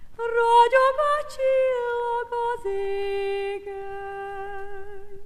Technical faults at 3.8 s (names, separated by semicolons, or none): clock slip clicks